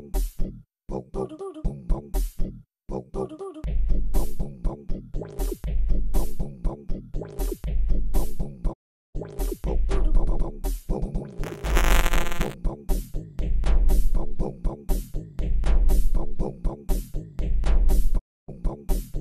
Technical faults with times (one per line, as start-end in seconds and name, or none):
8.72-9.17 digital broadcast dropout
11.43-12.54 buffer tearing
18.17-18.50 digital broadcast dropout